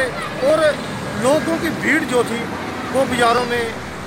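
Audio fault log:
0.5 s, 1.67 s, 3.38 s: dropped samples. The likely cause is a tiny run of samples, well under a millisecond's worth, missing from the stream at each point, so the waveform leaps straight from one value to a later one with nothing in between. That abrupt step is far too brief to remove any audible sound, but it produces a single sharp click each time, seen as a thin vertical line across the spectrum.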